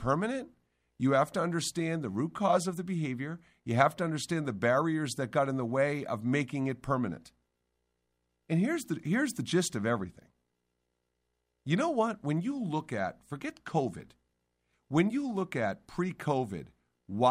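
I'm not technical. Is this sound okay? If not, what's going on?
Yes, the recording's technical signal is in good shape, with nothing wrong for a listener to pick out anywhere in it.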